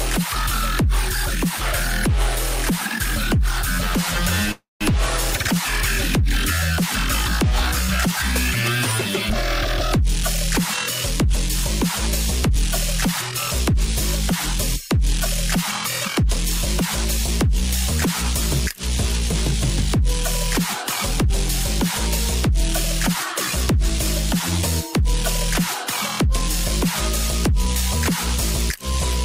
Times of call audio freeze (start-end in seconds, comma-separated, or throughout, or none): 4.51-4.84